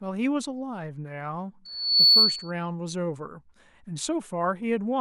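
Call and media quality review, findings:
Loudspeaker feedback squeal, 1.65 to 2.51 s: single 4.4 kHz tone swelling over under half a second to well above the speech. Mic picking up its own speaker, loop gain over one.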